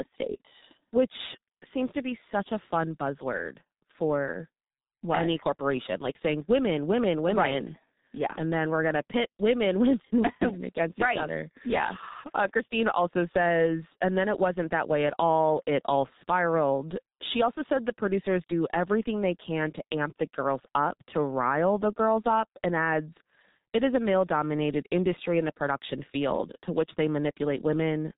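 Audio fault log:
throughout, G.723.1 codec: the speech is heavily muffled and hoarse across the whole recording, with nothing reaching above about 3.8 kHz, so sibilants and fricatives lose their edge and consonants smear together. The coarse, gravelly texture fits the codec's bitrate of roughly 6.3 kbit/s and its 30 ms frames: the vocal tract model is refreshed only once per frame, so rapid articulation is blurred.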